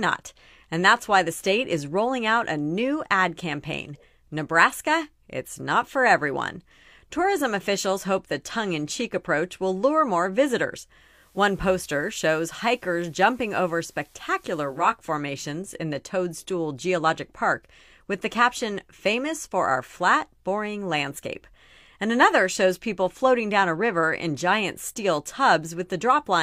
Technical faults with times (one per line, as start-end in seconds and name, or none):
10.95-15.02 digital radio blending to analogue